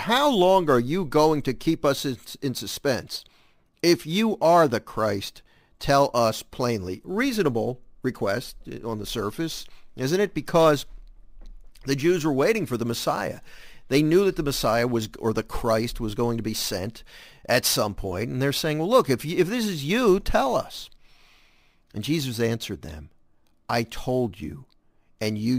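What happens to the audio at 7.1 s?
Speech upsampled from 22 kHz to 48 kHz by sample repetition, with no smoothing, causes imaging throughout, including 7.1 s: a metallic fizz from about 11 to 22 kHz, about 21 dB down.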